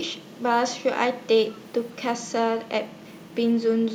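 Echo leak, from 1.56 to 1.6 s: a brief, very faint copy of the speech returns about 156 ms late, far below the main signal. The far end's echo canceller likely failed to remove all of its loudspeaker's output that its microphone picked up.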